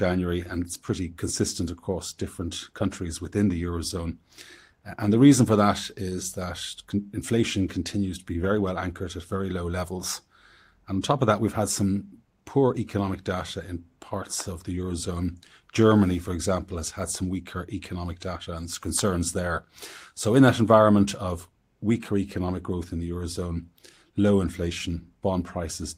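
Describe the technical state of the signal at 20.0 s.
At 20.0 s the speech signal is intact, with no dropout, distortion or other fault audible at that moment.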